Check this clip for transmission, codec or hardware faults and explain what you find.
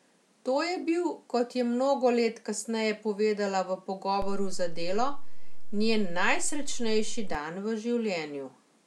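One hardware-type fault affects this speech clip: a DC step. From 4.22 to 7.35 s the waveform's zero line jumps by about −26 dBFS, as from a converter offset switching in, then steps back. Each edge gives a low thump. The waveform shows a shifted baseline, and the spectrogram shows brief low-frequency smears at both edges.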